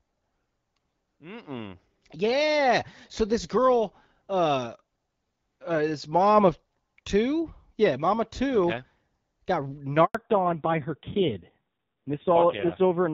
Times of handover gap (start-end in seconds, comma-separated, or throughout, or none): 10.05-10.15